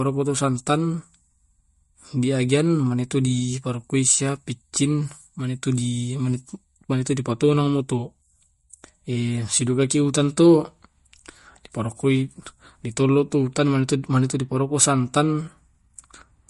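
Throughout, likely MP3 compression at a low bitrate near 48 kbps removes everything above 11.2 kHz and makes weak detail flicker, so the speech sounds plainly watery and swirly.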